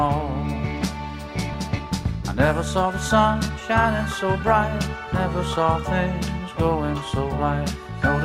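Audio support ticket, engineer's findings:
Skip ahead at 1.53 s. Receive path discarded about half a second of audio, probably through jitter buffer overflow or loss in transit, while later audio was already queued. Playback jumps forward with no gap or fill, and both sides of the cut are butted together, so the sound lurches abruptly mid-flow.

Jitter buffer speed-up, 2.53 to 5.07 s. Buffer overfilled, likely after delayed packets arrived in a batch. Receiver trimmed short pitch-period slices repeatedly to shed roughly 150 ms of excess delay, running playback about 6% fast. Pitch stays unchanged, but the passage sounds noticeably rushed until it settles after 5.07 s.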